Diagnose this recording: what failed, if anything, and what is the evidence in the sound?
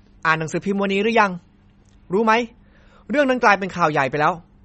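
The failure sits at the codec stage, most likely MP3 compression at a starved bitrate, with the sound pointing to something near 33 kbps. With so few bits, the encoder cuts the treble hard and gives up on weaker frequency lines, which drop in and out between frames. Throughout the speech, nothing survives above 8.3 kHz, leaving sibilants dull. The remaining band has a plainly audible watery swirl, and consonant attacks sound smeared.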